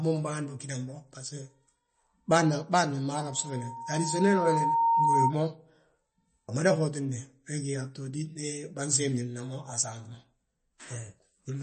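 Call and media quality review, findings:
Dull, watery speech for the whole clip, nothing above 8.3 kHz, swirly artefacts plainly audible. Likely MP3 compression at a low bitrate, around 32 kbps from the sound of it. Encoder's chopping the treble and dropping weak lines frame to frame.

Loudspeaker feedback squeal from 3.14 to 5.35 s, a steady 922 Hz tone swelling over roughly a second and a half to sit about 5 dB over the speech. Mic's hearing its own speaker, loop gain topping one at that frequency until the amp limits it or the loop's broken.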